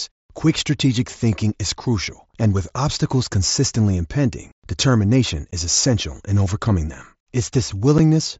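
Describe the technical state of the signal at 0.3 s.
At 0.3 s the signal is intact, with no fault present, the speech passing through the mSBC Bluetooth headset codec with its wideband limit at 8 kHz.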